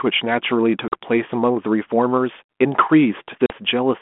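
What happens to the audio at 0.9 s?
A packet loss on an ADPCM call hits from 0.88 to 0.93 s. About 40 ms of the speech, probably a couple of packets, is gone and replaced by silence with hard edges. The 32 kbit/s G.726 decoder keeps its adaptive predictor and step size running while the sender's move on. So the two fall out of step. When the sound resumes, it comes back slightly distorted. It settles within some tens of milliseconds.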